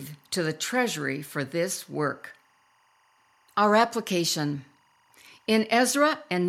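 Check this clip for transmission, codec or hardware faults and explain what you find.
One hardware fault is present: timecode bleed, running through the whole clip. A faint chirping warble sits behind the speech from start to finish. It comes from linear timecode leaking in from a nearby track or cable. The code is a square wave that flips between two pitches, here around 1 kHz and 2 kHz. It repeats at 24 frames per second. It sits roughly 40 dB below the speech, so it stays quiet but constant.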